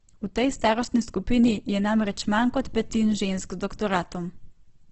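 A speech recording that sounds grainy, rough and noisy from start to finish, with the top end missing entirely: nothing reaches above about 8.2 kHz, giving a wideband rather than full-band character. The heavy damage is likely Opus compression at a very low rate, fitting roughly 12 kbps in its CELT music mode, where starved bands are filled with folded or noisy content instead of being left empty, so tones turn coarse rather than swirling.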